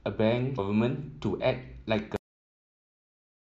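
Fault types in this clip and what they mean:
Damaged data in a compressed stream: corrupted bytes made the decoder misread a frame and lose sync, producing a brief disruption of about 16 ms at 0.58 s. The waveform shows a jagged discontinuity.
Cut-off end: the final buffers never reached the output, so the speech halts mid-sound at 2.16 s and drops straight to digital silence with no decay. The waveform ends abruptly in a flat line, and the spectrogram shows a hard vertical edge followed by blankness.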